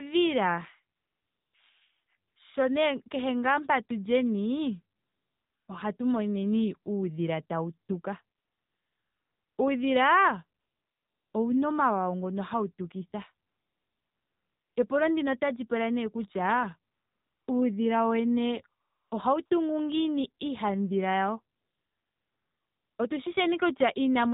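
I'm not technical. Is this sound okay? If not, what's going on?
No. The whole clip went through the AMR narrowband mobile codec, the old phone-network compression, so everything above 4 kHz is gone and the speech sounds buzzy and synthetic.

There's also AMR comfort noise: ten times between 0.96 and 22.98 s, the phone stopped sending sound during pauses and filled them with smooth artificial hiss, for example just before "ouna omawawa ngoka" and after "otali pula nee kutya".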